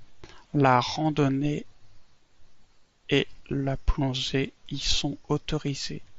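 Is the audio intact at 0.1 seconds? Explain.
Yes, the speech at 0.1 s plays through intact with no fault, carried as normal by the Bluetooth mSBC headset codec.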